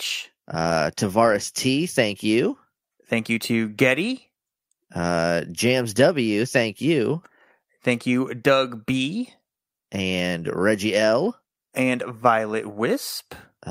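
No technical faults are audible anywhere in the speech.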